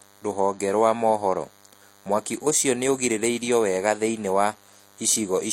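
Right through the speech there's a DECT cordless phone buzz: a thin, steady 100 Hz drone full of harmonics, sitting quite a way under the speech. A nearby handset or base station fires a radio burst every 10 ms, and the audio circuitry rectifies those bursts into sound.

Also throughout, the top end stops dead at 16.2 kHz, and you get two different flavours of coding smear layered on top of each other. That's likely transcoding between lossy codecs, an MP3 pass and then a low-rate HE-AAC pass, the later one spending bits on the earlier one's artefacts.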